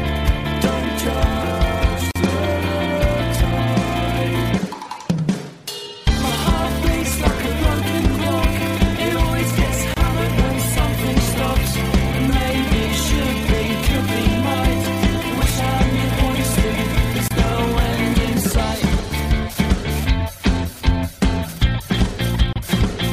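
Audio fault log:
2.11 to 22.56 s, gap at a join of encoded pieces: four short silences open in otherwise continuous sound, at 2.11 s (45 ms), 9.94 s (27 ms), 17.28 s (26 ms) and 22.53 s (29 ms). Each marks a point where separately encoded segments were butted together untrimmed, so the encoder's start-up delay and last-frame padding remain as dead air. Edges are smeared by the codec, so the silent part is shorter than the gap, and the sound resumes exactly where it broke off.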